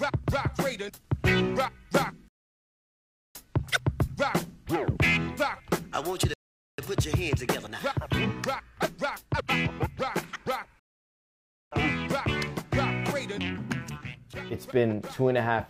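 The player's buffer ran dry three times, causing a rebuffering stall each time: playback halted while it waited for more downloaded audio. The sound drops to silence from 2.28 to 3.35 s, from 6.34 to 6.78 s, and from 10.79 to 11.71 s, adding about 1.07 s, 0.45 s and 0.92 s. After each gap the sound picks up exactly where it broke off, so nothing is skipped, but the timeline stretches by roughly 2.4 s in total.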